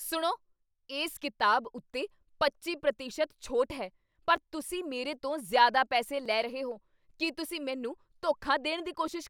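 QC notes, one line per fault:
0.63 to 8.13 s, clock drift buffer slips: about five clicks, one every 1.87 s. Likely mismatched device clocks forcing small sample blocks to drop or repeat.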